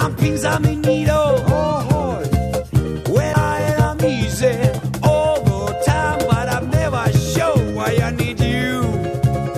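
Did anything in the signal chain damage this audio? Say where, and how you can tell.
Yes, at the playback stage: a CD skip at 3.33 s. There is a brief tick and a mute of only a few milliseconds, and then the audio resumes from a different point in the material instead of where it left off. The laser has jumped to another turn of the disc's spiral. A buffer dropout would also leave a short gap, but the audio would carry on from the same place. The change in position is what marks this as a skip.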